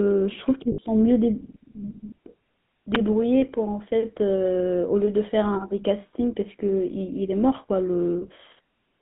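The speech passes through the GSM full-rate codec from start to finish: a 13 kbps-class coder that rebuilds the vocal tract from coarse, regularly spaced excitation pulses, inside a line band of about 150 Hz to 3.6 kHz. The result is a plainly audible buzzy, gravelly roughness with no top end.

From 0.72 to 0.79 s, lost GSM frames were concealed by repeating the last good frame. The gap, about 60 ms and consistent with three 20 ms frames, comes out as a brief rough, metallic ring instead of silence.

At 2.95 s, an uninitialised buffer was played before audio had been written into it, so stale memory was output as samples. It sounds like a sharp, loud crack of digital noise about 12 ms long, which fits a single 512-sample block.

From 3.40 to 3.43 s, a second case of lost GSM frames shows the same concealment over roughly one frame's worth of audio. The decoder holds the previous frame, producing a very short metallic smear where the sound briefly freezes.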